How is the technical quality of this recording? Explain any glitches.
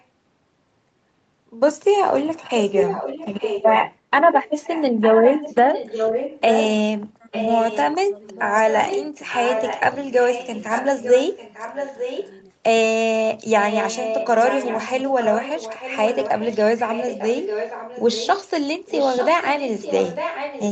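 The recording's quality is hurt by a recurring echo and one brief dropout. Both come from the far end's echo handling.

Echo leak runs from 2.62 to 6.68 s, 7.32 to 7.95 s, 8.26 to 12.31 s, 13.58 to 18.5 s, and 18.87 s to the end. A copy of the speech comes back about 0.9 s late. It's strongest in the first stretch, about 5 dB under the speech, and about 10 dB under after that. The likely cause is a loudspeaker echo the canceller didn't fully remove.

Speech suppressed in double talk happens from 7.0 to 7.33 s, as the echo overlaps the talker. The voice dips by roughly 20 dB for about a third of a second. That's likely the canceller ducking everything because it couldn't tell the talker from the echo.

Through all of this, the sound stays band-limited to 8 kHz, as expected for the call path.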